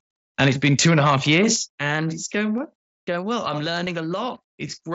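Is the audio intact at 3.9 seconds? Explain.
No. At 3.86 s, just after "going well I'm", a brief concealed Bluetooth headset packet loss occurs. A 7.5 ms gap, consistent with one lost packet, was filled by repeating the best-matching recent stretch of waveform. It is nearly inaudible, showing as a short repeated cycle in the waveform and a faint smear on a spectrogram.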